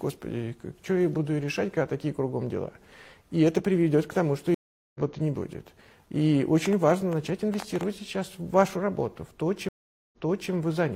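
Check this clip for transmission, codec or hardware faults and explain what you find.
Two kinds of fault turn up here, a pair of stream reconnects and a burst of clicks.

Stream reconnect, at 4.54 to 5.00 s and again at 9.69 to 10.51 s. Each time the connection dropped, the player went quiet and restarted its decoder mid-stream. The first gap is 0.41 s and the audio picks up roughly a third of a second further on. The second gap is 0.44 s and it comes back 0.38 s earlier, so you hear a short stretch repeated.

Train of clicks, from 6.66 to 7.84 s. There are about ten similar ticks at around 7.7 per second, unevenly spaced, standing roughly 10 dB above the surrounding sound. The likely source is interference from nearby equipment or a faulty connection injecting repeated pulses.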